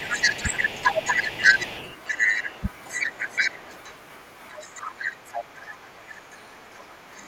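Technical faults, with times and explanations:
0.0–3.94 s, 4.51–5.6 s, 6.13–6.36 s and 7.16–7.23 s, other side's voice leaking through: a second voice sits under and over the talker. It is roughly 10 dB louder than the speech in the first stretch, about level with it near 5 s, and far quieter in the last two short scraps. This is likely echo from a loudspeaker that the echo canceller left in the microphone signal. A spectrogram shows two overlapping harmonic patterns with independent pitch contours.
0.42–0.53 s, 4.72–5.12 s, 5.75–6.29 s and 6.8–7.2 s, speech suppressed in double talk: the talker's level sags briefly while the other side is also talking. The dips are roughly 10 dB at the first and last, and about half that in the middle two. The likely cause is the echo canceller treating both sides at once as echo and turning everything down. On the waveform the envelope is pinched into short troughs, and on the spectrogram the harmonics fade together across the band.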